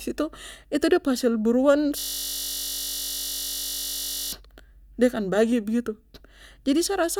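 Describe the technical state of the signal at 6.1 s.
At 6.1 s the speech signal is intact, with no technical fault audible at that moment.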